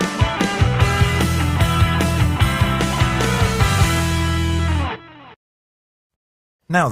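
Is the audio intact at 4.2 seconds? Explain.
Yes, the audio is intact at 4.2 seconds, with no dropout, click, distortion or other fault audible at that point.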